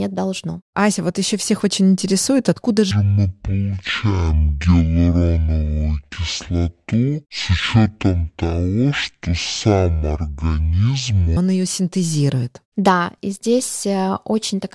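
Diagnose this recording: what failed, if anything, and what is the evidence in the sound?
The fault is a wrong sample rate at the playback stage. After "всех очень интересует откуда", from 2.91 s to 11.37 s, the speech drops a full octave (12 semitones) and runs at half speed until "он ее синтезирует". Samples are being clocked out at half their intended rate without resampling, which fits 48 kHz audio played at 24 kHz. On a spectrogram, harmonics and formants sit at half their normal frequencies and every syllable is stretched to twice its length. On the waveform, cycles look twice as wide.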